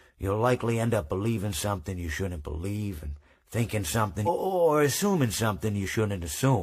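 At 4.23 to 4.29 s there's damaged data in the compressed stream: the decoder hits corrupt bytes, loses sync and throws out a brief glitch.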